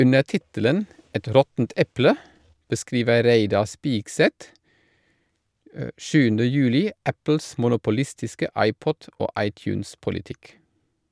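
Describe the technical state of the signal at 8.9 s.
At 8.9 s the speech signal is intact, with no fault present at that moment.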